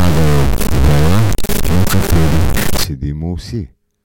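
From the start to 2.84 s the speech carries harsh, buzzy distortion consistent with a stuck bit, likely a high-order data line held fixed, with steps of about -10 dBFS. The waveform shows blocky offsets, pauses fill with loud noise, and the spectrogram smears broadband energy throughout that span.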